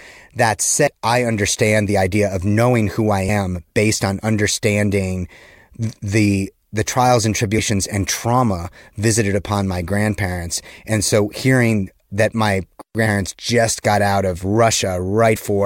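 At 0.86 s, just before "I understand the idea", the speech jumps ahead by roughly 300 ms, and again at 15.35 s by about 150 ms. Those are compressed frames skipped, the decoder dropping chunks that fit 23.2 ms frames.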